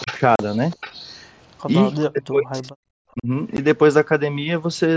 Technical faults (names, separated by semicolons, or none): echo leak; speech suppressed in double talk; unconcealed Bluetooth headset packet loss